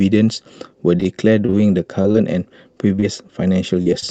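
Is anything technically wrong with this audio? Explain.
Yes. Repeated packet loss (robotic sound) runs from 0.97 to 2.16 s: eight short gaps, the longest 32 ms, are patched by extending the preceding speech, so this stretch sounds choppy, with pieces missing.

Short concealed packet loss occurs at 2.96–3.00 s and 3.00–3.04 s, then at 3.82–3.88 s and 4.00–4.04 s. The receiver briefly continues the last sound into each hole, which is heard as a quick smear or wobble.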